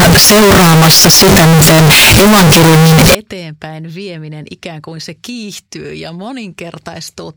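Speech in which the first 3.15 s, from 0.0 s, shows float read as integer: the samples were likely written as 32-bit float but read back as 32-bit integer. The sign and exponent bits then decide each value, so the waveform turns almost square at an almost fixed, high level regardless of the true level. The opening is very loud and harsh, with background noise as loud as the speech, though its pitch is still traceable.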